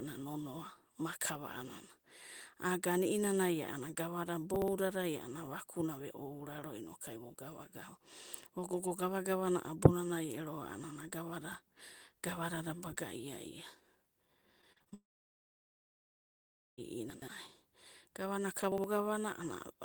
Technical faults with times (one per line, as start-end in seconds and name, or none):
4.56-4.68 chunks out of order
14.61-14.94 repeated packet loss (robotic sound)
14.94-16.79 long network dropout
17.10-17.28 chunks out of order
18.72-18.84 chunks out of order